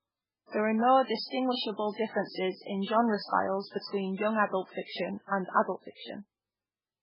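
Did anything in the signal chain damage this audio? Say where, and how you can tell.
Yes, at the codec stage, throughout the speech: nothing reaches above 5.3 kHz, and the sound is heavily watery and swirly, which fits a very low bitrate near 8 kbps and likely MP3 compression. A plain low-pass filter would cut the treble without that frame-to-frame swirl.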